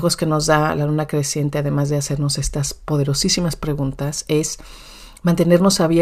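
Listening to the speech in this clip, nothing technical stood out as wrong at any point.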